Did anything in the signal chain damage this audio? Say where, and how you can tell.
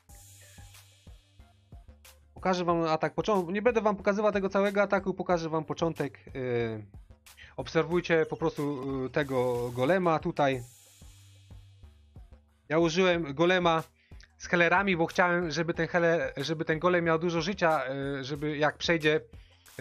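Yes, there's a block of digital silence at 8.83 s, and it points to the driver or buffer stage. The gap is only about 2.2 ms, so it comes across as a single sharp tick rather than an audible hole. The signal drops straight to silence and snaps back with no fade. That's the signature of an output buffer that wasn't filled in time, so a short run of zeros went out in place of the audio.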